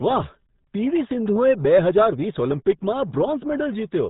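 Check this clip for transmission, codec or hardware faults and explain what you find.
There's one fault, and it runs through the whole clip: RealAudio 14.4 codec damage, and it's heavy. That old dial-up speech coder, working at what sounds like 8 kbit/s, strips everything above 3.9 kHz, so the speech comes out muffled and gargly throughout.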